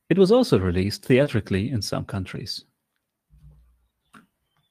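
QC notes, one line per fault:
1.23–1.27 s, short concealed packet loss: About 20 ms of audio reached the decoder too late, just after "was also released". The receiver bridged the hole by extending the preceding sound and blended back into the real signal before "in some", so the join comes across as a brief smear or wobble.
1.25–1.27 s and 2.31–2.37 s, lost packet rebuilt from error correction: Lost audio was recovered from the low-bitrate Opus in-band FEC copy carried by the following packet. The first repair covers 20 ms, which fits one packet, and lands inside the concealed stretch. The second, after "in some", covers 40 ms, which fits two packets. There is no gap, but these stretches sound rougher and noisier because the backup copy holds less detail.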